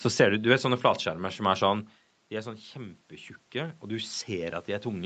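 Automatic gain rising on speech: with the input about 14 dB quieter, gain climbs gradually from 2.29 s to the end, swelling voice and room noise together.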